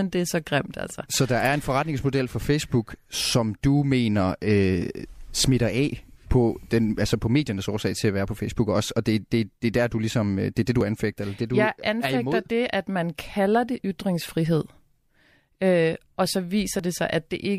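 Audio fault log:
10.81 s and 16.79 s, audio missing between chunks: a few milliseconds vanish after "øh det er det" and after "og så", joined with no silence unlike a dropout, likely from 3-second chunk boundaries.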